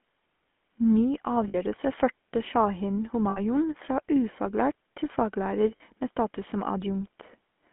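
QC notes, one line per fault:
Throughout: GSM full-rate codec. The speech has been squeezed through a vocal-tract model driven by a sparse, regularly spaced pulse excitation. That crude excitation replaces the natural glottal waveform, so the sound carries a plainly audible buzzy, gravelly roughness, consistent with the 13 kbps full-rate GSM codec. The band runs only from about 200 Hz to 3.4 kHz, which leaves the speech boxy and dull, with sibilants blunted.
1.48–1.56 s, 3.30–3.39 s, 5.76–5.81 s: lost GSM frames. At each of these points the decoder had no valid data, so it reused the parameters of the last good frame. The first two gaps last 60 ms and the third lasts 40 ms, which fits runs of three and two lost 20 ms frames. Instead of the speech moving on, the sound briefly hangs as a rough, metallic ring before normal decoding resumes.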